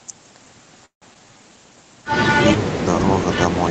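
At 0.85 s packets were likely delayed in transit and the jitter buffer ran dry. This is a call audio freeze. The receiver stretches the last sound into a fading buzz, which falls to about 120 ms of silence before the audio resumes at 1.04 s. The audio picks up exactly where it stopped, so nothing is lost, but roughly 160 ms of gap has been inserted.

From 1.14 to 1.17 s a stretch of audio was dropped because newer packets were already waiting. The result is a skip ahead. Around 70 ms of sound vanishes, and the two sides are spliced together with only about 10 ms of fill, so the audio jumps abruptly forward.

Between 1.19 and 1.56 s the jitter buffer was short of reserve and rebuilt it by repeating individual pitch periods. This jitter buffer slow-down plays the audio at about 88% speed without changing pitch, adding 51 ms. The sounds in that stretch are audibly drawn out.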